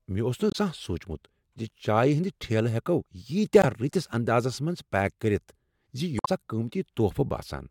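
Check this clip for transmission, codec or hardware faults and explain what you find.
Damaged data in a compressed stream shows up three times in this speech clip: at 0.49 to 0.56 s, at 3.59 to 3.65 s just before "رٔتِس اندازس", and at 6.17 to 6.28 s. Some of the coded bytes were wrong there. The decoder misread those frames, lost its place, and hunted for the next valid frame header. Each event is brief, 50 to 120 ms. It is heard as a short chirp, squawk, click or hole cutting into the speech.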